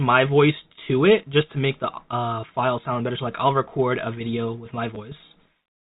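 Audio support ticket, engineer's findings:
Packet loss with last packet repeated at 4.95 s: one packet dropped in transport, and the receiver's concealment refilled the 10 ms gap by replaying the previous packet, which fits 10 ms packetisation. The replayed segment leaves a small blip in the speech. A single repeat, too short to build into a buzz. G.711 mu-law path at 64 kbps: narrowband telephone sound, no audible coding damage beyond faint noise.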